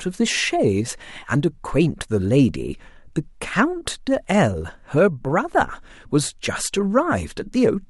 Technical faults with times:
none

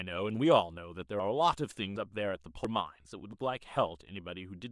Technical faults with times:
1.19 dropped buffer (overrun)
1.96 dropped buffer (overrun)
2.65 dropped buffer (overrun)
3.33 dropped buffer (overrun)

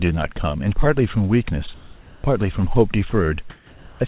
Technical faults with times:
1.74-2.24 comfort noise in place of the background
3.10-3.12 sound dropped by the voice detector
3.50-4.00 comfort noise in place of the background

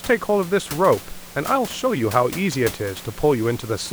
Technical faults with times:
none

